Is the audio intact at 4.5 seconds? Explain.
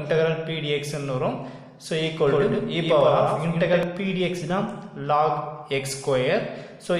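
Yes, at 4.5 seconds the audio plays through cleanly with no dropout, click, distortion or other fault.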